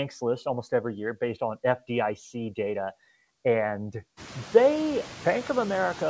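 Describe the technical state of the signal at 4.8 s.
At 4.8 s a noise suppressor is at work, as it is throughout the clip. It estimates the steady background and pulls those frequency bands down by about 14 dB, frame by frame. The room noise has risen by roughly 18 dB just before this point, so the suppressor works hard here: the noise dips between phrases and swells back under the speech.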